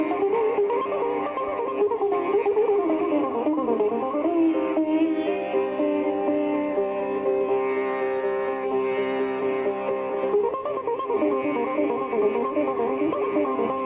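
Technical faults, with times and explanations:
No technical faults detected.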